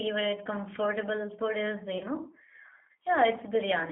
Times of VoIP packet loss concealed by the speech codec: 1.98-2.05

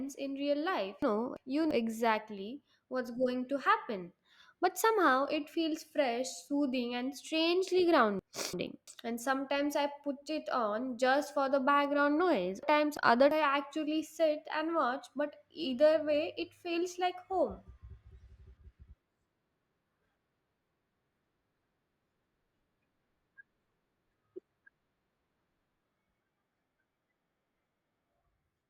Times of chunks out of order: 1.02-1.71, 8.19-8.87, 12.63-13.31

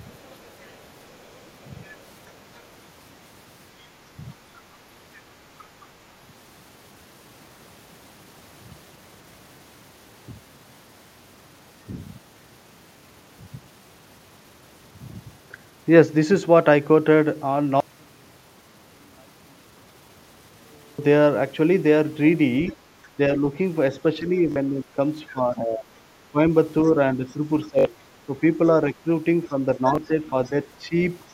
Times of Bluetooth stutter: 24.52-24.56, 27.79-27.85, 29.95-29.98

